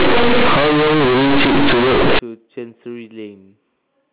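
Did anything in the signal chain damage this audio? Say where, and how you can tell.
Yes: companded audio read as linear at sample-format conversion, 0 to 2.19 s. Unexpanded mu-law bytes buzz loudly even through pauses, which clipping would leave quiet.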